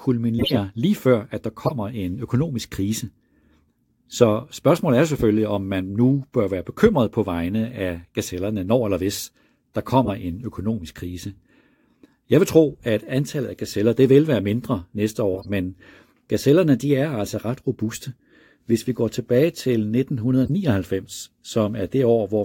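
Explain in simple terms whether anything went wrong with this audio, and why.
Five short bursts of garbled sound interrupt the speech, at 0.39 to 0.58 s, 1.66 to 1.72 s, 10.05 to 10.10 s, 15.34 to 15.50 s and 20.44 to 20.50 s. Each is a corrupt frame decoded: some data in the compressed audio got scrambled, and the player decoded it anyway, producing sound at the wrong pitches. The first and fourth bursts span several damaged frames and last longer; the others are brief. The first two are the loudest.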